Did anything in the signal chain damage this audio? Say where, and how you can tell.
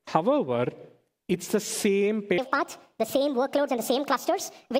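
Yes, a wrong sample rate at playback. From 2.38 s, pitch and speed rise together by 1.5 times, about seven semitones, fitting 32 kHz audio played at 48 kHz.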